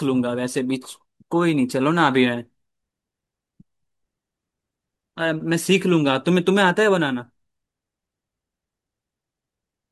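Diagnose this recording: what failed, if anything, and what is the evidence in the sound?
Nothing in the signal chain has failed; the speech carries no audible dropouts, clicks, distortion, level jumps or timing breaks at any stage from capture to playback.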